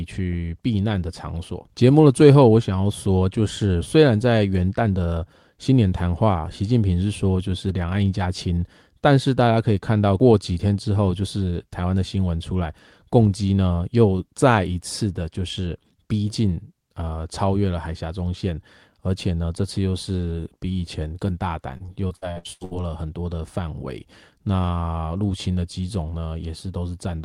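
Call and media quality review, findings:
Repeated packet loss (robotic sound), 21.77–22.73 s: eight gaps up to 79 ms, concealment fill giving choppy speech. Repeated holes, not one dropout, set it apart from a single loss.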